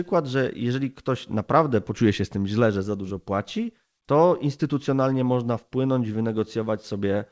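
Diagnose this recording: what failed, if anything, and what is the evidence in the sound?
Nothing failed here: the speech comes over a call path that sounds like a G.722 link at around 64 kbps, so there's simply nothing above 8 kHz, which is just how that codec carries it.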